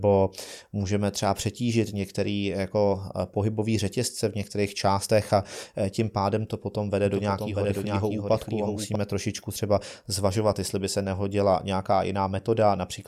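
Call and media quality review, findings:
Doubled audio track, 7.05 to 8.95 s. Speech repeats about 0.7 s behind itself, copy a few dB quieter, full-band, no decay or room colour, abrupt onset and cutoff. Likely a second capture path or edit layering two misaligned copies.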